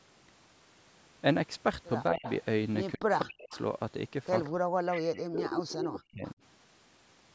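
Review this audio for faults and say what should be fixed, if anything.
The speech gets pulled down in three places: briefly at 2.12 to 2.27 s by about 20 dB, then much harder at 2.96 to 3.51 s and across 4.5 to 6.38 s, dropping by about 40 dB with roughly a second and a half chopped away in that last stretch. That's speech suppressed in double talk, likely from an echo canceller that couldn't tell the local talker from the far side and ducked both. A canceller tuned for full duplex, or headsets, would stop this.

There's also a delayed copy of the speech, trailing about 200 ms behind, at 2.23 to 2.35 s, 3.19 to 3.59 s, 4.44 to 4.49 s, 4.94 to 5.22 s and 5.5 to 5.83 s. It sits about 20 dB down at its quietest and climbs to about 5 dB below the speech in that last burst. That's echo leak, likely a loudspeaker on one end whose canceller didn't fully scrub the microphone pickup. Better echo cancellation or lower speaker volume on that end would fix it.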